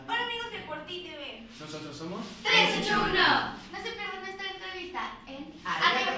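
No technical faults are audible.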